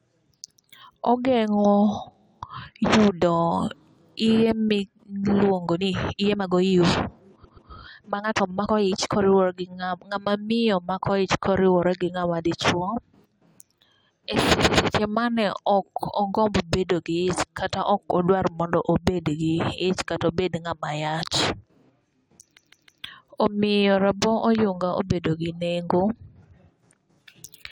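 From 5.71 to 9.23 s, right after "iye miluongo" and up to "gi ng'ama miyo mako", the speech turns rushed at about 1.56 times normal pace while the pitch stays put. This is a time-stretched section, likely from software squeezing the passage to fit a set length by dropping short pieces of audio so the pitch doesn't rise.

Inside that stretch, from 7.43 to 7.69 s, there is a stutter from repeated frames. A block of about 131 ms, consistent with five compressed frames, plays twice more than it should, and the passage runs 261 ms longer. The same fault comes back at 14.62 to 14.88 s with an identical 131 ms block repeated twice, again adding 261 ms. At 22.56 to 23.03 s a longer block of about 157 ms, which fits six frames, loops three extra times, adding 470 ms.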